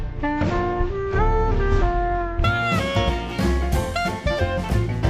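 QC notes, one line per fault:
0.00–2.44 s, stereo read as mono: the sound drags at half speed and sits a full octave (12 semitones) lower than it should, with a faint mirrored copy of the content showing up in the top half of the spectrum. The left and right channels' interleaved samples are being played back in sequence as one channel, so every stereo frame becomes two consecutive samples, doubling the duration and halving the pitch.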